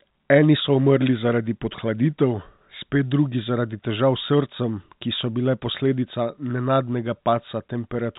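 No technical faults can be heard in this speech.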